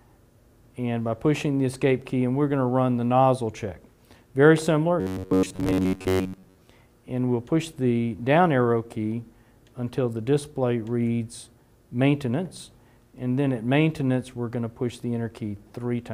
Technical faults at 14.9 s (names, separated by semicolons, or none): none